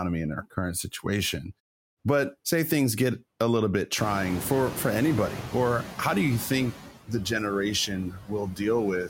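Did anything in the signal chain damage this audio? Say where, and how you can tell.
Yes, the call-processing stage damaged it through noise suppressor artifacts throughout the 9-second speech clip. The suppressor pulls down bands it judges to be steady noise by about 17 dB, so the noise sinks between the words and rises under them. This is most noticeable after the room noise jumps by about 25 dB at around 4 s and sits only about 12 dB below the speech. Clean silent pauses alone would not show this. The tell is the gain pumping frame by frame inside the speech.

The same suppressor also causes speech cut by the noise suppressor between 8.1 and 8.61 s. About a third of a second of the voice is turned down with the background, by up to about 15 dB, so that stretch sounds swallowed and faint. A level fade or dropout would hit all frequencies and the noise equally. Here only the quieter speech components sink, and they track the noise estimate. 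That points to the suppressor mistaking speech for noise.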